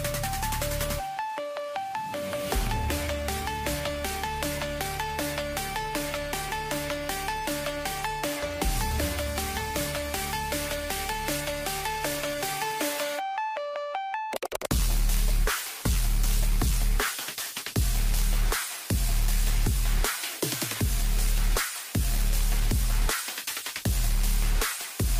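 Nothing technical stands out anywhere in this audio; there's no fault to point to and no time worth flagging.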